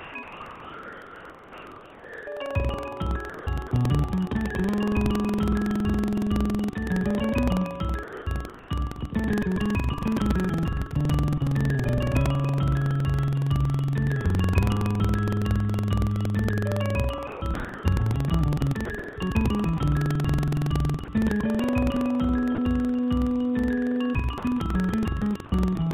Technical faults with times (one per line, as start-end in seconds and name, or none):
0.00-25.93 buffer tearing
0.00-3.71 sound chopped by the voice detector
8.03-8.27 sound dropped by the voice detector
8.03-8.69 comfort noise in place of the background
17.27-19.16 sound chopped by the voice detector
21.05-21.08 sound dropped by the voice detector
22.55-22.58 sound dropped by the voice detector
24.38-25.52 sound chopped by the voice detector